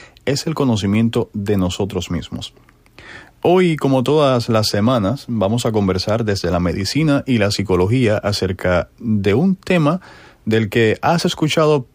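No technical faults can be heard anywhere in the speech. Nothing in the recording calls for a timestamp or a closer look.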